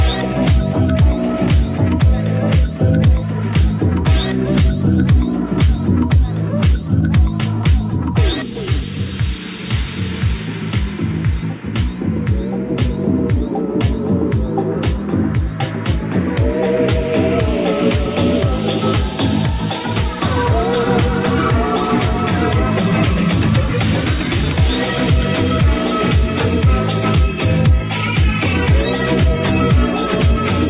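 No technical faults can be heard anywhere in this audio.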